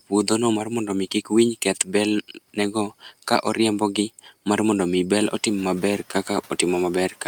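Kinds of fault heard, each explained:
Speech cut by the noise suppressor: the suppressor mistook speech for noise, dipping three brief stretches by up to about 12 dB, leaving them faint and swallowed.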